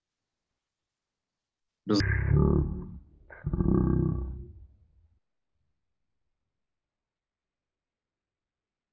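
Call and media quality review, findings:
Wrong sample rate from 2.00 s to the end. Speech abruptly drops very low and slow. Runs at one third speed, pitch down about 19 semitones. Speed and pitch fall together by the same ratio, so playback is running without conversion. Fits 48 kHz audio played out at 16 kHz. Probable component: playback or resampling stage at a device or stream-format switch.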